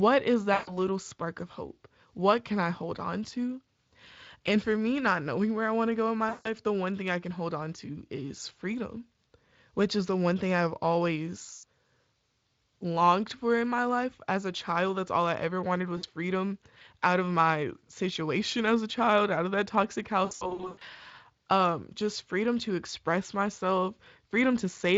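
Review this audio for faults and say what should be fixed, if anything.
VoIP packet loss concealed by the speech codec occurs at 0.53–0.80 s, 6.29–6.50 s, 11.53–11.64 s and 15.97–16.05 s, with roughly 140, 160, 100 and 60 ms missing. A cluster at 20.25–20.82 s drops about 340 ms in scattered bursts, the longest run 100 ms. The decoder repeats its last pitch and filter at falling gain, so each gap becomes a fading buzzy or noisy smear that stays weak briefly after audio resumes. A plain dropout would go silent or click instead. The loss is prevented with a jitter buffer and forward error correction, or a more reliable network path.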